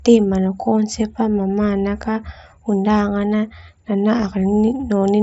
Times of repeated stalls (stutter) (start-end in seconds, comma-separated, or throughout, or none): none